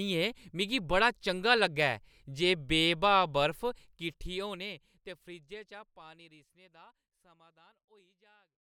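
No faults to report; the speech holds steady, with a smooth fade-out easing the level down from around 3.5 s to the end, as an editor would shape it.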